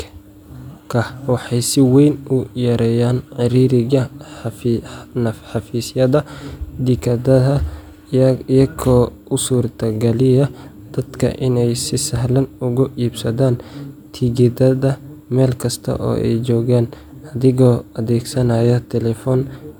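Speech recording, no technical faults heard anywhere in the clip.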